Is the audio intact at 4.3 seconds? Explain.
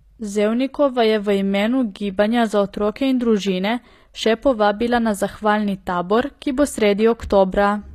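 No. HE-AAC compression runs throughout, so 4.3 s is affected. The treble is likely rebuilt by spectral band replication, copying lower bands upward rather than coding them. The s sounds turn gritty and metallic, nothing remains above 14.9 kHz, and the damage fits a bitrate near 24 kbps.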